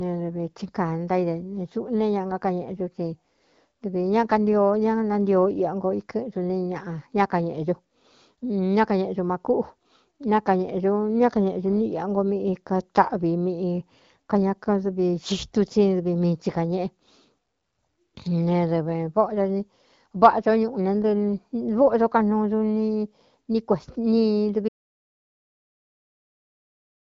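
The input was likely lost, perhaps through a disconnected device or failed link, so from 24.69 s to the end the speech cuts to silence with no room tone.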